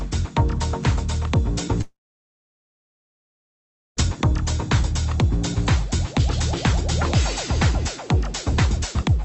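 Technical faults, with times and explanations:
1.81–4.00 s, long network dropout: audio stops arriving, a brief fading buzz continues the last sound, then about 2 s of silence; likely packet loss, with the missing stretch skipped.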